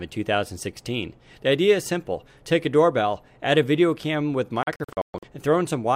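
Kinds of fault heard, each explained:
Digital broadcast dropout: the receiver lost valid frames and muted, so between 4.63 and 5.28 s the sound falls into brief silent holes, the longest 128 ms.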